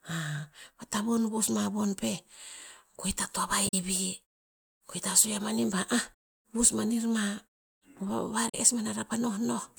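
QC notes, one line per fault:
3.67–3.74 s, 6.10–6.13 s, 8.48–8.55 s: damaged data in a compressed stream. Each is a brief glitch as the decoder misreads corrupted frames and resyncs on the next header. Unlike the smooth fades of the muted pauses, these are abrupt.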